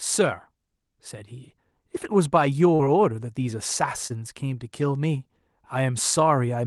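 Short concealed packet loss occurs at 2.75–2.81 s and 4.07–4.12 s. About 40 ms and 20 ms of speech arrived too late, so the receiver extended the preceding sound to bridge each gap and then blended back in. Each gap is heard as a brief smear.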